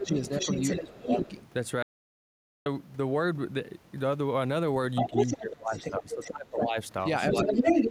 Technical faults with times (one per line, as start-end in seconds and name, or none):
0.00-0.14 speech suppressed in double talk
0.05-1.35 other side's voice leaking through
0.80-1.07 speech suppressed in double talk
1.83-2.66 audio dropout to silence
4.95-5.37 other side's voice leaking through
5.07-6.76 speech suppressed in double talk
5.73-6.31 other side's voice leaking through
7.30-7.90 other side's voice leaking through
7.32-7.66 speech suppressed in double talk